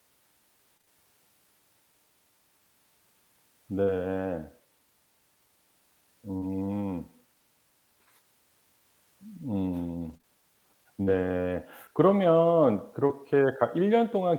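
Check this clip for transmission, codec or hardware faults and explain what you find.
Four kinds of packet-loss fault are audible in this speech.

From 0.77 to 0.89 s there is repeated packet loss with a robotic sound: three gaps of up to 20 ms, about half the span patched by extending prior sound, giving a choppy texture.

At 3.83 to 3.89 s and 6.37 to 6.43 s there is short concealed packet loss: about 40 ms goes missing each time and is bridged by continuing the previous sound, heard as a brief smear or wobble.

At the end of each of those holes, 3.87 to 3.89 s and 6.41 to 6.43 s, one 20 ms lost packet is rebuilt from error correction. The decoder plays the low-bitrate backup copy carried in the following packet, so there is no gap, but the frame sounds rougher and noisier.

Between 10.09 and 13.11 s there are scattered short gaps: around four separate losses, the longest roughly 40 ms. 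Each is patched by extending the preceding sound, leaving brief ticks or hiccups.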